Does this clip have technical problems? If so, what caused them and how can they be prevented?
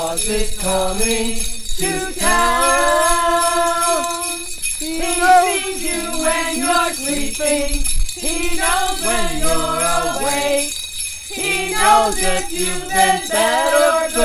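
No, the signal comes through steady and intact, with nothing in it that points to a recording, transmission or playback fault.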